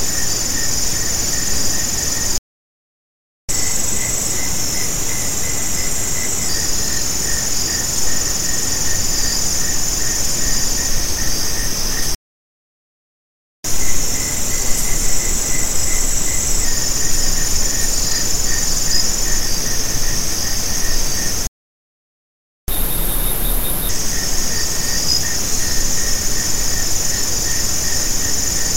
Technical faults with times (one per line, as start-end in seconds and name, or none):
2.38-3.49 playback stall
3.49-6.49 catch-up at higher speed
12.15-13.64 playback stall
13.64-16.64 catch-up at higher speed
21.47-22.68 playback stall
22.68-23.89 catch-up at higher speed